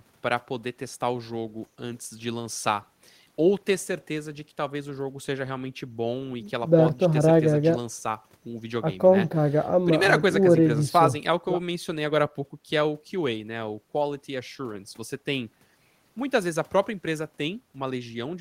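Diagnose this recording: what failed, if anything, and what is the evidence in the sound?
Nothing in this speech recording points to a failure at any stage of the signal chain. No audible event calls for a diagnosis.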